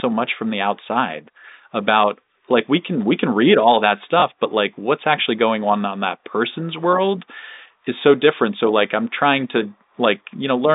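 At 4.20 to 4.22 s, after "can read all that", and at 7.54 to 7.56 s, after "on that person's world", there's packet loss with the last packet repeated. That's 20 ms replayed each time, which fits one lost packet, and it's heard as a small blip.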